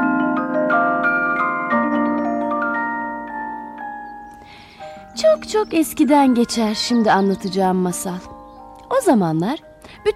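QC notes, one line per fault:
No audible faults found anywhere in this audio.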